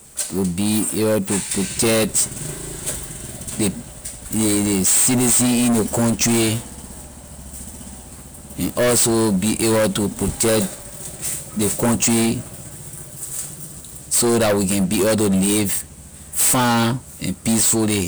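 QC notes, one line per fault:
Throughout, hard clipping: the speech is driven about 20 dB past full scale, so roughly a fifth of all samples are sliced flat. Unlike gentle soft saturation, the squared-off tops spray high harmonics, giving a harsh, gritty fuzz on every loud syllable.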